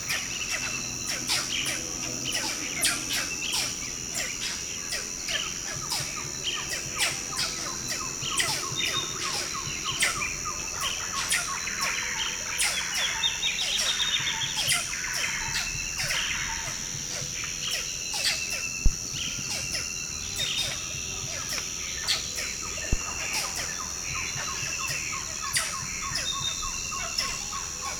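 At 14.02 s there is a single sharp click, a thin vertical line across the spectrum. It is likely dropped samples: a fraction of a millisecond is missing, so the waveform jumps abruptly to a later value. Nothing audible is lost beyond the click.

At 18.86 s and again at 22.93 s a phantom power thump appears. Each is a deep, brief low-frequency hit, about 50 ms long, decaying in about 12 ms, as a supply switching on or off on a live input sends a voltage step through the coupling capacitors.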